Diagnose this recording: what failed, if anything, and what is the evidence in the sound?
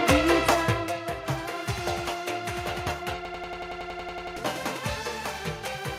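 Driver or buffer stage: a system hang loop runs from 3.25 to 4.37 s, where a 92.9 ms slice repeats about a dozen times as a machine-gun stutter at 10.8 Hz. The stalled system left the hardware replaying one ring buffer, consistent with 4096 samples, losing roughly a second of audio.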